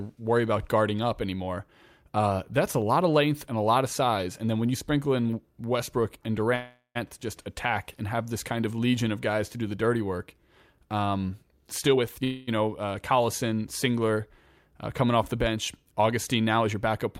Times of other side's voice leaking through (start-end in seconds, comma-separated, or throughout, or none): none